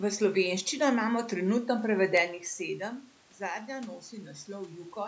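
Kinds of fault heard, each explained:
The signal carries no technical fault: the call's microphone processing leaves nothing above 8 kHz and trims the lowest bass, the room's background noise sits beneath the speech, and the level shifts around 2 s and 4.5 s come from the talker moving relative to the microphone, not from the system.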